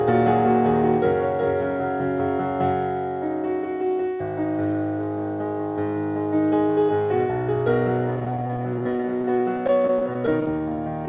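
From 8.16 s to 11.08 s the sound turns choppy and robotic. This is repeated packet loss: dozens of gaps, each up to 26 ms, patched by extending the preceding audio.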